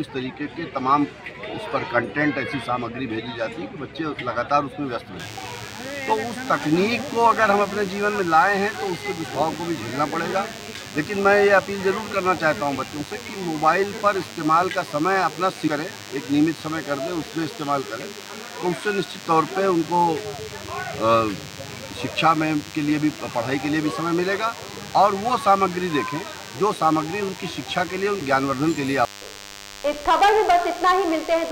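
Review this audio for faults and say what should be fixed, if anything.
From 5.19 s right to the end there's a DECT cordless phone buzz: a thin, steady 100 Hz drone full of harmonics, sitting roughly 15 dB under the sound. A nearby handset or base station bursts every 10 ms and the audio circuit rectifies it. Move the DECT base well away from the recording gear and its cabling.

Around 15.66 to 15.68 s you get compressed frames skipped: a brief smeared blip where the audio jumps ahead about a fifth of a second. That fits around ten missing frames of about 26 ms each, either lost from the file or rejected by the decoder as damaged. Re-export or re-transfer from a clean source and check the file's integrity.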